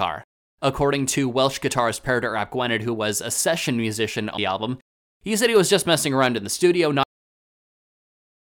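At 4.37 s, right after "was a session musician", there is a CD skip: the pickup laser jumped to a different turn of the disc spiral. The player mutes very briefly, leaving a small tick, and resumes at "album he said he" from a different point in the recording.

At 7.03 s, just after "around in the studio", the audio has a cut-off end. The final buffers were never written out, so playback stops mid-sound and drops straight to digital silence with no natural decay, staying silent to the end.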